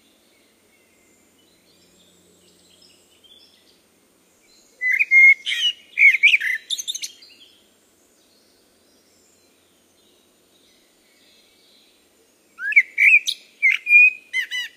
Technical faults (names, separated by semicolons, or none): audio missing between chunks